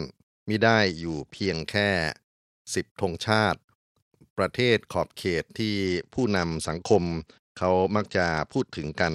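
From 0.59 to 1.60 s, and again from 5.86 s to the end, a Bluetooth SBC bit pool drop dulls the speech as treble thins and gritty noise rises, which points to a bit pool near 10 (about 77 kbps). The grit sets it apart from a clean low-pass filter.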